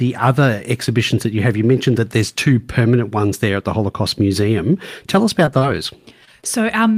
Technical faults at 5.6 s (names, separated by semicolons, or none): short concealed packet loss